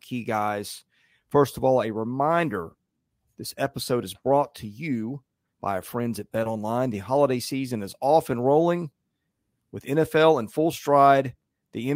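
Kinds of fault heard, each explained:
Nothing stood out on listening to this speech recording.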